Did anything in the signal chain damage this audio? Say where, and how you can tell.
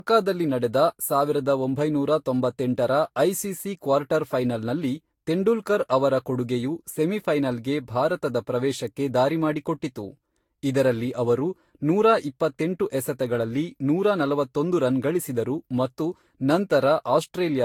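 Yes. Throughout the speech the sound is swirly, hollow and smeared, with blurred consonant attacks and nothing above 19.2 kHz. This is likely generation loss at the codec stage: roughly seven lossy Vorbis passes around 70 kbit/s, each requantising on a shifted frame grid.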